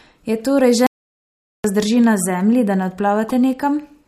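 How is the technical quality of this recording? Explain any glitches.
The recording has two clear glitches.

From 0.87 to 1.64 s the speech cuts to dead silence, with no room tone, for about 0.78 s. This is an audio dropout to silence, likely from a lost input while the recorder kept writing silence.

At 3.29 s a brief, loud glitch peaks around -10 dBFS. This is a corrupt frame decoded: damaged bits in a couple of compressed frames put energy at the wrong frequencies.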